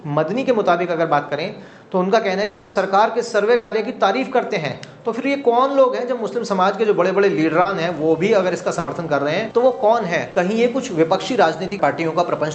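At 2.43 s the sound turns into a smeared continuation of what came just before, lasting about 0.34 s, and the same happens at 3.55 s for about 0.18 s. Both are likely long network dropouts: audio stopped arriving, the receiver stretched the last sound across the whole gap with no silence, and playback resumed further on without the missing stretch.

Short concealed packet loss occurs at 7.61 s. About 40 ms never reached the decoder in time, and the receiver patched the hole by extending the preceding sound before blending back into the real signal. The patch is heard as a brief smear or wobble.

At 8.79 s a burst of packet loss removes about 80 ms. The receiver bridges the gap with a continuation that falls in level, so it comes across as a short held buzz or fading hiss. The audio then picks up slightly further along, with the part in between gone.

The same short concealed packet loss recurs at 10.31 s and 11.67 s, each again about 40 ms filled with an extension of the preceding sound and heard as a brief smear. 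Throughout, the call codec path limits the audio to about 8 kHz, consistent with a wideband Opus setting.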